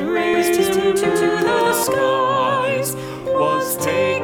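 From 0.34 to 1.84 s the sound is doubled: a second, equally loud copy trails about a fifth of a second behind, dry and full-band, cutting in and out abruptly. This doubled audio track likely comes from a slower capture path or edit.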